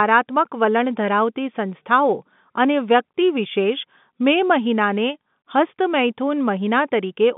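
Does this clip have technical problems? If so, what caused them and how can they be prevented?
No, this clip has no technical problems, so there is nothing to prevent.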